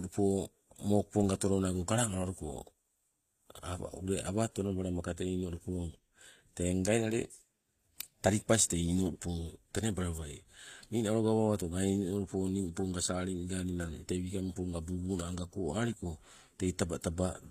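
From start to finish the speech has a bright but synthetic top end. Sibilants come out gritty and lispy, with a metallic sheen, and nothing at all survives above 14.9 kHz. That's most likely HE-AAC compression at a low bitrate, roughly what you'd expect around 24 kbps. Only the lower band is really coded, and the treble is patched in by copying lower bands upward, so its harmonics don't line up with the real ones. The damage is plainly audible.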